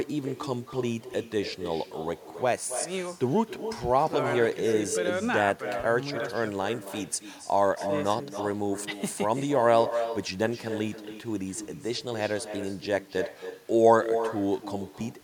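Throughout the speech, every phrase is trailed by a quieter, thinner copy arriving roughly a third of a second later, about 9 dB down. This is echo with no canceller: the far end's loudspeaker feeds its microphone, and nothing strips that return path out.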